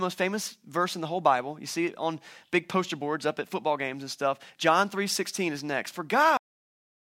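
At 6.37 s the speech stops abruptly in the middle of a sound and falls straight to digital silence with no natural decay, which lasts to the end. This is a cut-off end: the final buffers of audio were never written or played out.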